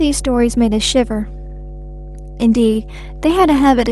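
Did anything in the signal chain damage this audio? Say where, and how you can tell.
Yes. Mains hum runs through the whole speech clip, a steady low tone at 50 Hz sitting only slightly below the level of the speech itself, with low harmonics stacked above it. The damage happened in the analogue wiring before the converter: a ground loop or a nearby transformer coupled the 50 Hz power line into the signal path. Because the tone never varies with the speech, it was added by the electrical environment, not the source.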